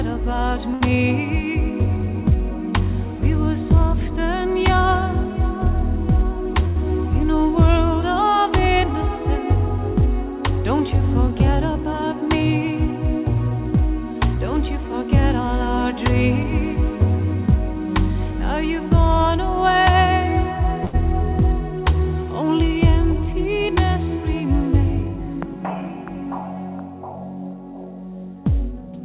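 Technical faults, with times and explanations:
0.74–0.83 s, 6.68–6.78 s and 20.85–20.96 s, short stall from a late packet: each time a packet didn't turn up on schedule, the jitter buffer ran dry and the receiver held the last bit of sound until it arrived, about 65, 81 and 87 ms of fill. Nothing gets skipped; playback resumes where it left off. You hear a brief smeared hold with a slight buzz or dip, and the delay grows by the same amount.
11.31–12.20 s, 14.37–16.44 s and 23.64–26.06 s, jitter buffer speed-up: the buffer was carrying more audio than it wants, as after delayed packets arrive together, so the receiver trimmed it back by repeatedly cutting out tiny pitch-period-sized slices. The sound runs at 105%, then 104% and 104%, with pitch unchanged, shedding roughly 50, 70 and 100 ms. The first comes across as slightly hurried. Across all of this, the band stops at 4 kHz, which fits a G.711 call codec.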